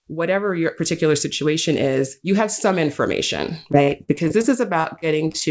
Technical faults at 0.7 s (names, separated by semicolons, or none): none